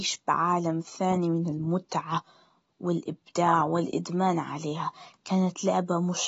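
From start to finish the speech sounds dull and smeared, with a watery, fizzy edge on the sibilants and nothing above 7.7 kHz. That's likely AAC compression at a low bitrate, something around 24 kbps, squeezing the top band out.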